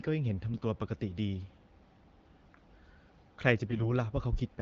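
AMR bit errors corrupt the less protected frame bits, roughly one in twenty, at 0.54 to 0.64 s and again at 3.70 to 3.86 s, turning the speech briefly hoarse and gargly.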